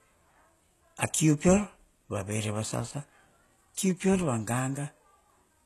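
A speech recording that has most likely been through HE-AAC compression at a very low rate, consistent with roughly 16 kbps, throughout. The treble is rebuilt from copied lower bands rather than coded, so sibilants sound gritty and metallic, and nothing is present above 12.3 kHz.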